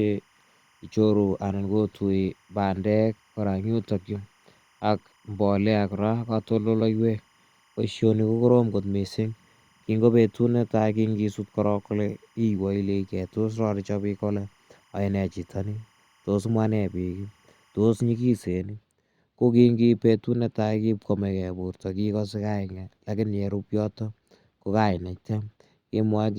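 Timecode bleed runs from 0.0 to 18.47 s: 25-frame linear timecode leaks in faintly, far below the speech, as a steady chirping warble alternating near 1 and 2 kHz.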